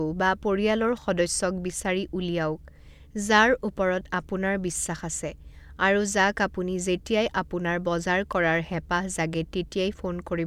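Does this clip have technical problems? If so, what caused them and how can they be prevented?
No, nothing in this speech recording stood out as a technical problem on listening.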